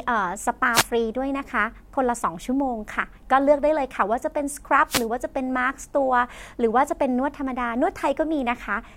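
Wireless microphone noise hits break into this speech clip at 0.73 to 0.84 s and 4.87 to 5.07 s, as brief swishes of static. The analogue FM radio link fades when reflected signals cancel, so receiver noise surges briefly over the voice.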